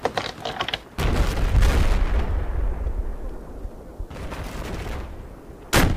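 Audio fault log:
Throughout, video or display buzz: a buzz at 59.94 Hz, the picture's field rate, carries a rough hash above it, with a thin whistle at 15.7 kHz from the line scan. Interference from a screen or video cable is leaking into the audio path, sitting roughly 25 dB below the signal.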